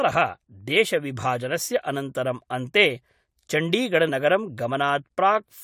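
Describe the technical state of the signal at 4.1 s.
A brief glitch cuts into the speech at 4.08 s, lasting about 10 ms. It comes from damaged data in the compressed stream: corrupted bytes there made the decoder misread the frame, lose sync and hunt for the next valid frame header.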